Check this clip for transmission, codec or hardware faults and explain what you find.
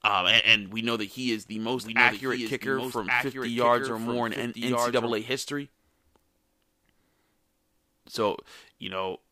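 There is one fault, a doubled audio track, from 1.77 s to 5.11 s, starting just after "he is the". A second full-band copy of the speech runs roughly one second behind the original, about 5 dB quieter, with no decay or room colouring. The likely cause is the signal being picked up again through a slower path. On a spectrogram the speech patterns repeat, offset by about a second. On the waveform the extra copy starts and stops abruptly.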